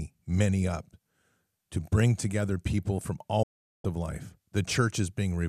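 At 3.43 s, after "bring together people from", a digital broadcast dropout mutes the speech. The receiver lost valid frames, faded out over 8 ms and stayed silent for 0.41 s until "of life" returns at 3.85 s. The waveform goes flat, and the spectrogram shows an empty vertical band.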